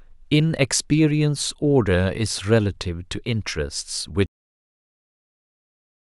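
A cut-off end at 4.26 s ends this speech recording mid-sound: the final stretch of audio buffers was never written out or played, so instead of decaying naturally the sound drops straight to digital silence and stays there for the remaining couple of seconds.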